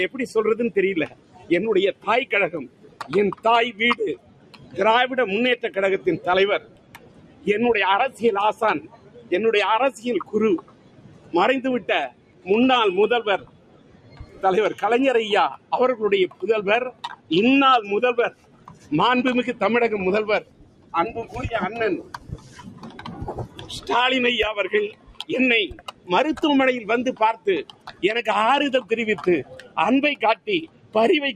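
Throughout, a speech-style noise suppressor is applied to sound, swinging level by around 15 dB: sustains and tails sink while attacks pass, unlike a compressor, which follows loudness. The suppressor cuts sound by up to about 15 dB from 0.11 to 17.31 s (roughly seven seconds affected), 18.3 to 23.89 s, 24.9 to 26.09 s and 27.13 to 30.95 s, as fading dips rather than hard dropouts.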